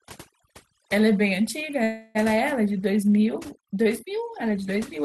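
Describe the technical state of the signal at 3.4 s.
At 3.4 s you're hearing overdone noise removal, and it's there for the whole clip. The denoiser was pushed too hard, so bands sitting near its noise estimate get gated out along with the softer parts of the speech. That leaves near-silent gaps full of twinkly specks.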